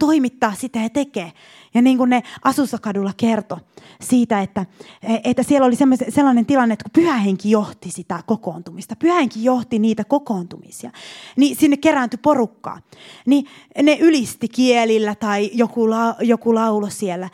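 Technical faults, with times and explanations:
No technical faults are audible anywhere in the recording.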